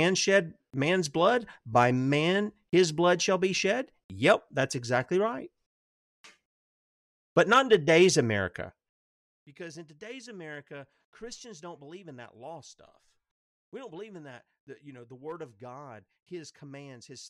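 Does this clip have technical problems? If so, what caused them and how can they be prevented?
Yes. Between 8.64 and 9.10 s, a gain reduction of roughly 20 dB was applied in coarse 4 dB jumps, about ten per second, with no smoothing between them. Each abrupt jump puts a small discontinuity into the waveform, so the speech gets a ticking, zipping texture while the level drops. This is zipper noise. Interpolating the gain sample by sample, or ramping it across each buffer, prevents it.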